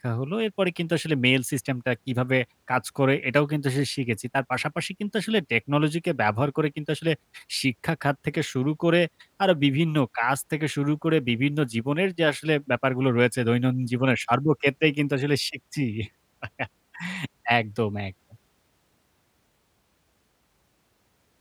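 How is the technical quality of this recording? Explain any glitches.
The technical quality of this recording is good, with no glitches to explain.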